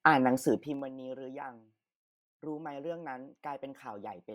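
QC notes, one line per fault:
0.46–0.93 s, zipper noise: the speech level drops by roughly 20 dB in unsmoothed 2 dB steps, about twenty a second. Each jump clicks, giving a rapid ticking. The waveform shows a staircase envelope, and the spectrogram shows thin broadband vertical lines at each step.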